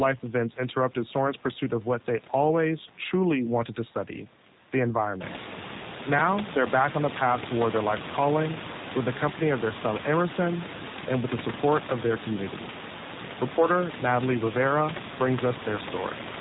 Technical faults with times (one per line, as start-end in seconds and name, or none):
0.00-16.40 G.729 codec